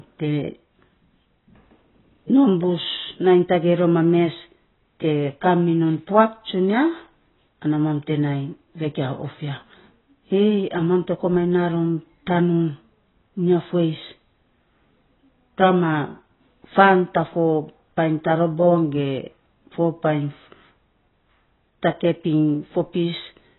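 Speech, heavily squashed throughout by what's likely AAC compression: nothing above 4 kHz, dull smeared sibilants with a warbly fizz, which fits a very low 16 kbps AAC-LC encode.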